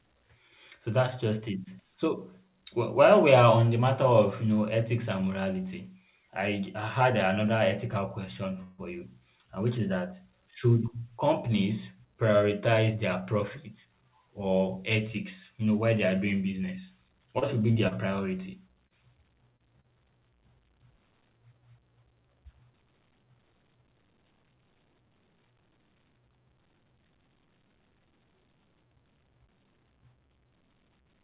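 Speech carried over a call path whose audio stops at 4 kHz, which fits a G.711 A-law narrowband codec, has three faults. From 8.63 to 8.81 s a call audio freeze stretches the last sound into a fading buzz or hiss for about 0.15 s, likely because delayed packets emptied the jitter buffer. Unlike loss, nothing is missing, and the speech resumes exactly where it stopped. From 12.42 to 13.94 s a jitter buffer speed-up trims roughly a tenth of a second in pitch-period-sized pieces, so the speech runs about 5% faster at the same pitch and sounds hurried rather than interrupted. From 17.39 to 19.87 s repeated packet loss leaves six short holes, the longest 36 ms, each patched over, giving choppy sound with pieces missing. Unlike the single freeze, about 0.18 s of real audio is gone here.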